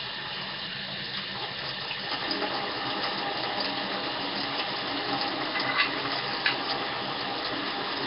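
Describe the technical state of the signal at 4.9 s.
At 4.9 s the sound carries the rough, hissy halo and smeared texture of Nellymoser compression, present throughout the clip and likely from Flash's Nellymoser Asao codec at a low rate near 22 kbps. Its fixed bit budget leaves weak bands noise-filled. A spectrogram shows nothing above 5.3 kHz and blotchy, noise-speckled bands.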